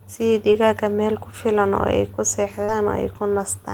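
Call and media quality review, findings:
Short concealed packet loss at 0.53 to 0.56 s and 2.64 to 2.70 s: brief smear and wobble in the speech. Receiver-side jitter buffer and decoder concealment extend the last pitch or noise over the 20 ms and 40 ms holes, then crossfade back. The sound smears rather than going silent or clicking.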